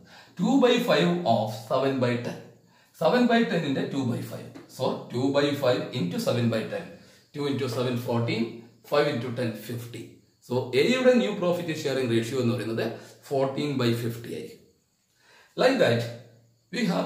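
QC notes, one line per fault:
Nothing stood out on listening.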